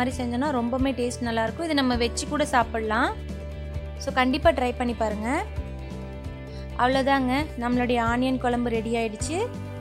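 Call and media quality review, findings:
Nothing stood out on listening, and there is no finding to raise for this clip.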